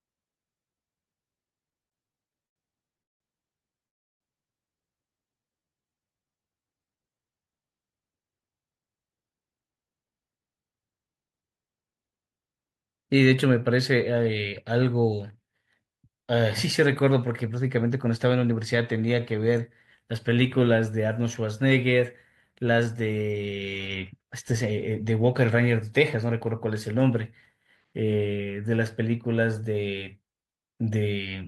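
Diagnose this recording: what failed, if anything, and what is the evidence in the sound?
The network path and the receiver's jitter buffer are at fault. Between 1.69 and 3.22 s the speech stalls 18 times as late packets left the buffer empty. The receiver filled 469 ms with continued sound and nothing is missing, but about 31% of that span is concealed and the longest hold lasts 178 ms. On a spectrogram the harmonics freeze into short flat horizontal smears. The waveform shows repeated near-identical cycles, fading in the longer holds.

Jitter buffer slow-down appears twice. From 3.79 to 7.16 s the receiver stretched the audio by 355 ms to 90% speed. From 18.82 to 20.65 s it added 124 ms, running at 94%. The pitch stays put while syllables draw out. The spectrogram shows formant tracks elongated in time at unchanged frequency. The waveform shows single pitch periods repeated back to back, rebuilding the buffer's reserve.

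Inside the first slow-down, from 3.87 to 4.22 s, a call audio freeze stops the sound. It is silent for about 330 ms, and afterwards the speech picks up where it left off. The most likely cause is packets held up in transit, which drained the buffer and added 334 ms of delay. On the waveform this is a flat, near-zero stretch. On the spectrogram it is a blank vertical band with no energy.

A jitter buffer speed-up runs from 22.55 to 27.85 s. With surplus audio queued, the receiver trimmed short pitch-period chunks, about 0.3 s in total, so the speech plays at 106% speed. The pitch is unchanged but the delivery sounds hurried. On the spectrogram the syllables and formant transitions are compressed in time. The waveform has small discontinuities where cycles were removed.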